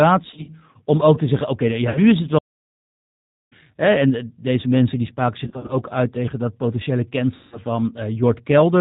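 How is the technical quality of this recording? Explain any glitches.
The quality is poor. The speech runs through a narrowband low-bitrate codec for the whole clip, and four bursts of packet loss plus one long playback stall interrupt it.

The G.729 codec, here at 8 kbit/s, shapes everything. This codec does not store the waveform. It models speech with a vocal tract filter, a pitch predictor and a few pulses per 10 ms frame, and cuts off everything above 4 kHz. The codec damage is plainly audible. The voice sounds dull, rough and slightly synthetic throughout.

VoIP packet loss concealed by the speech codec occurs four times. The first is from 0.31 to 0.50 s, with about 90 ms missing in short gaps spread over 160 ms. The second is from 1.90 to 2.01 s, about 50 ms between "te zeggen oké ja" and "is het". The third is from 5.45 to 5.74 s, about 130 ms scattered over 240 ms. The fourth is from 7.36 to 7.60 s, about 160 ms right after "uit tegen dat potentiële". 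At each gap the decoder reuses its last pitch and filter with falling gain. The voice smears into a buzzy, fading tone. It stays weak for a moment after the audio resumes.

A playback stall runs from 2.38 to 3.53 s, a silence of about 1.13 s. It comes right after "is het", and the speech picks up again with "hè en deze mensen". The sound simply cuts out mid-flow and later resumes. The likely cause is the player running out of buffered data, or its thread being blocked, so nothing reached the output until it recovered.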